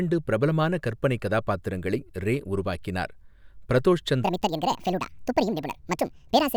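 From 4.24 s to the end of the clip, the speech plays as a section at the wrong speed: it runs 1.7 times too fast, so pitch jumps by about ten semitones and the voice turns thin, chipmunk-like and hurried. The likely cause is this stretch being played against the wrong clock. On a spectrogram the harmonic stack and formant bands leap upward at 4.24 s, and the waveform's syllable envelopes bunch tightly together.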